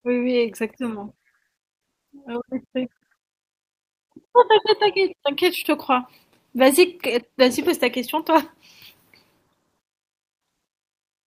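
No technical faults are audible anywhere in the recording.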